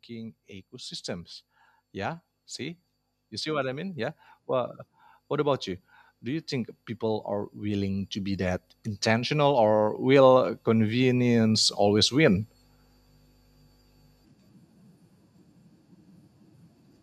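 A speech recording with automatic gain rising twice: from 1.92 to 5.68 s by about 5 dB, then from 6.24 to 12.46 s by about 13 dB. Voice and background noise swell together over seconds, showing the gain control lifting everything, unlike a talker moving closer.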